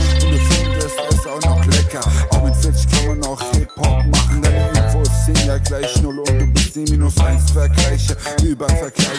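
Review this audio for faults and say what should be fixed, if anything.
Nothing needs fixing; no faults can be heard.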